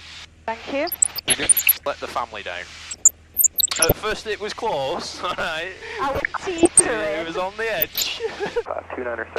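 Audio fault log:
0.86–1.85 s, 2.91–3.92 s, 6.12–6.89 s and 7.78–8.05 s: DAB burbling. Weak reception lets bit errors, around 0.7 to 1.5 percent, slip past error correction into the MP2 audio data. Corrupted samples put short blips of noise in single sub-bands, and corrupted scale factors make sub-bands leap in level for up to a frame, so the sound is overlaid with bubbling blips of noise. There are dozens of damaged frames in each of the longer stretches: 42, 42 and 34.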